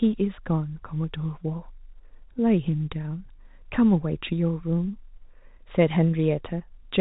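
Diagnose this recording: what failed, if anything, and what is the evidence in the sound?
Nothing in this speech recording has failed: the audio carries the expected character of G.711 telephone coding, with the band stopping at 4 kHz and only the faint level-following quantisation noise that format always leaves.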